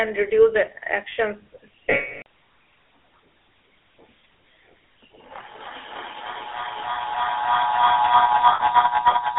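The whole clip carries the sound of the GSM full-rate codec: a buzzy, gravelly roughness laid over the speech, with the top end shut off around 3.5 kHz and the bottom thinned below about 300 Hz. That texture fits the old 13 kbit/s full-rate coder, which rebuilds the voice from a vocal-tract model fed by a sparse, pulse-like excitation, so a lot of natural detail gets swapped for that grainy buzz.

At 1.9 s there's a run of lost GSM frames lasting about 360 ms, through to 2.26 s. The decoder keeps replaying the last good frame's settings, so the sound freezes into a rough, metallic ring that is cut to silence before normal audio returns.

From 5.46 s to the end at 9.38 s a feedback howl builds up. It sounds like two devices in the same room sharing the call, with each trip from loudspeaker back into microphone adding gain, so the repeats grow instead of dying away. It narrows to a shrill tone around 4 kHz, with the loop coming round roughly every third of a second, and peaks at about 11 dB above the speech.

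A second, shorter patch of lost GSM frames lands inside the howl at 8.52 s and lasts about 80 ms. You get the same brief metallic smear as the decoder holds the last frame.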